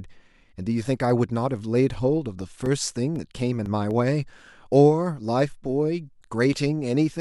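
CD scratch ticks run from 1.91 to 4.16 s: ten brief clicks, the longest only a few milliseconds, about four per second. A surface scratch wipes out more data than error correction can rebuild on each rotation, so the player patches the gap, leaving regular ticks under the speech.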